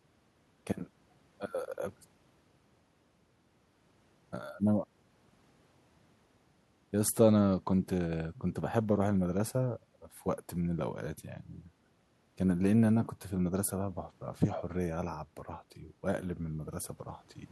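No technical faults can be heard anywhere in this recording.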